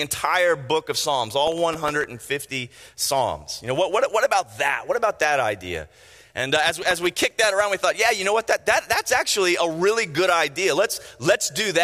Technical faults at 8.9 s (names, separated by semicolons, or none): none